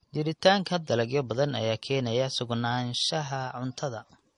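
Throughout, the speech was likely transcoded between lossy codecs, fitting low-rate MP3 then AAC; both layers of artefacts sound together, with nothing above 10.6 kHz.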